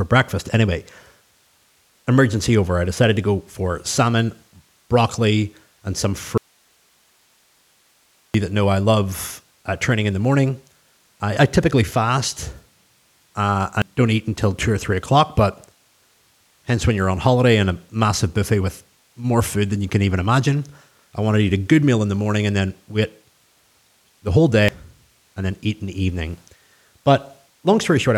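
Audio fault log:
6.38–8.34 s, audio dropout to a faint residue: the speech cuts off abruptly and the gap of nearly 2 s holds only a thin hiss, about 40 dB below the normal level, before the speech snaps back mid-flow with no fade on either side. The hiss shows the path after the break stayed live while the wanted signal stopped reaching it, most likely a brief loss of the source feeding an otherwise working input.
13.82 s and 24.69 s, compressed frames skipped: at each point the speech lurches forward, losing about 200 ms. That jump fits two whole frames of 92.9 ms each being dropped, either missing from the stream or rejected by the decoder as damaged.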